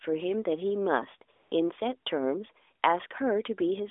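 From 1.32 to 1.52 s the phone's discontinuous transmission decided the line had gone quiet and sent no speech frames for 200 ms, so the receiver generated AMR comfort noise from a rough outline of the background's level and spectral shape. That stretch loses its real background and becomes a smooth, even hiss that switches in and drops out abruptly. It sits inside the narrowband 300 Hz to 3.6 kHz mobile sound, whose light coding fits AMR-NB at 12.2 kbps.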